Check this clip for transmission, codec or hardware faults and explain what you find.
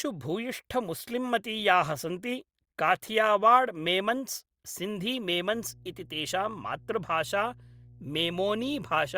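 One hardware fault is present: mains hum from 5.51 s to the end. A ground loop or nearby transformer is leaking the 60 Hz power line into the signal path, adding a steady low buzz with some low harmonics beneath the speech, roughly 25 dB down.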